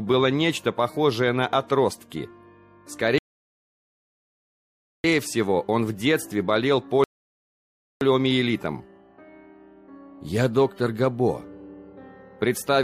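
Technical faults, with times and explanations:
3.18–5.04 s and 7.04–8.01 s, rebuffering stall: the player runs out of downloaded audio and falls silent until more data arrives. The sound then picks up exactly where it stopped. Nothing is skipped, but about 1.86 s and 0.97 s of dead air are added.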